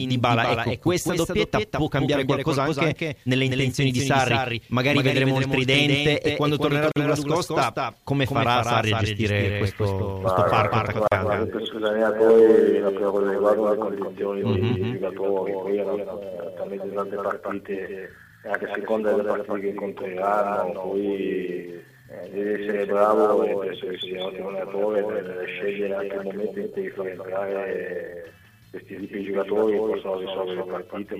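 Across the whole clip, the sound is followed by a second, full-band copy about 200 ms behind and roughly 5 dB quieter. This is a doubled audio track, likely from the audio being captured twice over paths of different speed. The copy carries no decay or room colour.

At 6.92 to 6.96 s, a 46 ms gap opens in continuous sound. A second one, 40 ms long, falls at 11.08 to 11.12 s. Each is a gap at a join of encoded pieces: separately encoded pieces were joined untrimmed. The edges are smeared by the codec, and the sound resumes where it stopped.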